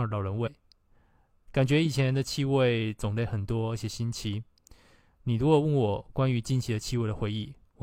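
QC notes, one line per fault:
0.42–0.49 s, damaged data in a compressed stream: a short burst of about 64 ms where the speech gives way to a garbled, non-speech blip. Corrupted bytes in the encoded stream left the decoder unable to interpret the frames at that point; it produced invalid output, lost frame sync, and had to scan forward for the next valid frame header before clean decoding resumed.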